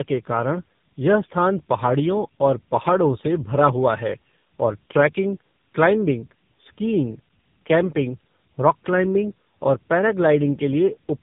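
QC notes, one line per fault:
Throughout: tandem speech coding, two speech codecs in series, likely GSM full rate then AMR-NB, compounding roughness and warble beyond one codec's, band-limited below 3.8 kHz.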